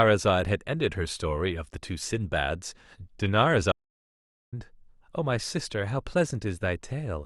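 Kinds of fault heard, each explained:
Audio dropout to silence: The speech stops abruptly at 3.72 s and returns just as suddenly at 4.52 s. For about 0.8 s there is silence. No room tone or background hiss remains underneath. That points to the input being lost while the recorder kept writing silence. A disconnected device, a broken link or an accidental mute is the likely cause. Whatever was spoken in that gap is missing.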